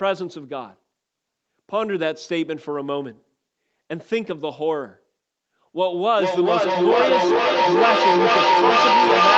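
From 5.84 s to the end at 9.37 s there is feedback echo between two devices: each sound returns roughly every 0.4 s, thinner and more ringing, and builds to about 5 dB above the speech instead of fading as a single room or line echo would.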